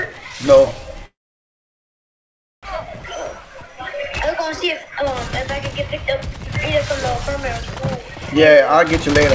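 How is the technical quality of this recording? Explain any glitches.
The recording has two kinds of glitch: a long gap early on and two stretches where the audio is sped up. The call path's G.722 coding leaves nothing above 8 kHz, so the spectrogram is flat-topped throughout.

From 1.06 to 2.67 s there is a long network dropout, likely from packets that never arrived. The receiver stretched the last sound into a fading buzz, then left near-silence. About a second of audio is lost, and the later audio comes back roughly half a second later than it would have. The waveform shows a decaying smear and then a flat line. The spectrogram shows a blurred band that thins out to an empty gap.

Jitter buffer speed-up runs from 2.80 to 5.13 s at 118% speed, and again from 6.90 to 8.77 s at only 102%. The buffer had built up extra audio, so the receiver repeatedly cut out pitch-period-sized slices to shed about 0.4 s in the first stretch and a few hundredths in the second. 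The first stretch sounds hurried at an unchanged pitch. The spectrogram shows compressed timing with the harmonics staying at the same heights.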